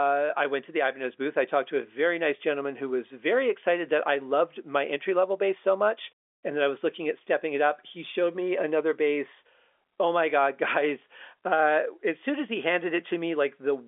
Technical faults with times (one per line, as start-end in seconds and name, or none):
none